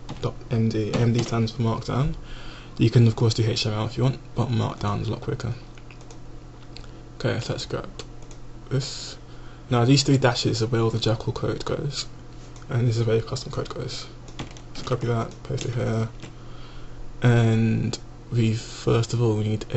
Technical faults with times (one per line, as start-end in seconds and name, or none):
none